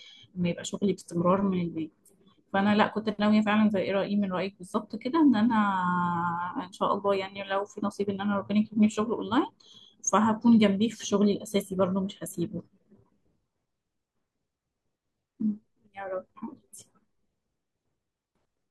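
Nothing in this recording calls for comment, since no technical fault turns up anywhere in the audio.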